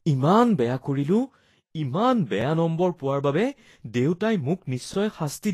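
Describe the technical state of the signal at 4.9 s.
At 4.94 to 4.96 s there is an overlapping chunks fault: a 23 ms stretch of the speech plays twice because the next processing chunk began before the previous one finished, consistent with chunks about 2.5 s long. It is heard as a click or brief stutter at the join. On the waveform, a short segment appears duplicated with a discontinuity at its seam; the spectrogram shows a thin vertical broadband line there.

Around this moment, as across the whole clip, the speech is plainly hissy and grainy, with roughened tones and smeared onsets, and nothing sits above 14.1 kHz. The likely cause is Vorbis compression at a low rate, one that fits roughly 33 kbps: the codec lowers its cut-off and quantises the upper band so coarsely that fine detail turns into noise of similar energy. A spectrogram shows a hard ceiling at 14.1 kHz and speckled, patchy texture in the treble instead of clean harmonics.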